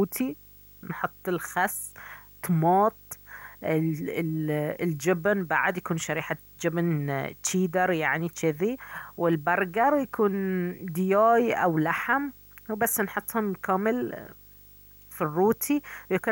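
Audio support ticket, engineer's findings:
Video or display buzz present across the full clip, under the speech. A 50 Hz field-rate buzz with harmonic hash above it sits roughly 25 dB below the speech, plus a whine at 15.6 kHz, the line rate. A screen or video cable is coupling into the audio path. Spectrogram: a steady line at 15.6 kHz and a stacked 50 Hz harmonic comb, unbroken through pauses. Waveform: a persistent low-level fuzz between phrases.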